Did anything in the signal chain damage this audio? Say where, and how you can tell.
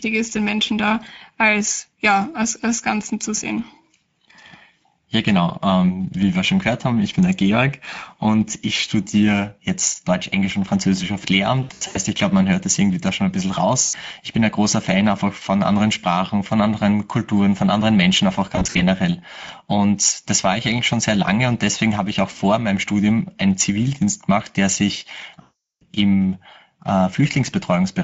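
Yes. The codec stage left damage across the whole clip: this is speech coded with the Speex codec at a rate that fits roughly 17 kbps. That CELP encoder lacks enough bits to model the excitation faithfully, so the pitch pulses and fine structure are rebuilt coarsely. The result is plainly audible from start to finish: the speech sounds hoarse and grainy, with a noisy, slightly synthetic edge on voiced sounds.

The network stage adds VoIP packet loss concealed by the speech codec at four points. When frames went missing, the decoder kept extrapolating its last pitch and filter while lowering the gain, so the speech smears into a buzzy tone or coloured noise that fades, and recovers slowly. Scattered gaps between 11.63 and 11.99 s (longest about 80 ms) precede "ich glaube man hört". A 100 ms hole at 13.83–13.95 s follows "da schon ein bisschen", and scattered dropouts occur at 18.55–18.82 s. 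The worst is a continuous 0.4 s loss at 25.41–25.86 s after "gemacht der sich".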